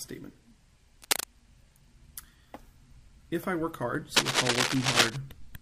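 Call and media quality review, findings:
Cable scratch noise, 1.02–1.26 s and 4.16–5.16 s. Dense, uneven scratching bursts over the sound, about 5 dB above the signal. Likely a worn cable, connector or control being moved. Contact resistance fluctuates rapidly, injecting crackle.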